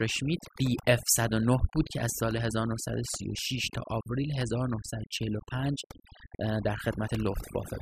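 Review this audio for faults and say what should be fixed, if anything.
Overdone noise removal runs throughout. Frequency bands near the noise floor are cut hard, leaving twinkling specks in the background. Set the noise reduction gentler.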